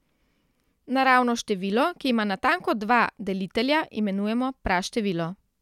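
No technical faults turn up anywhere in this speech recording, so there's nothing to flag here.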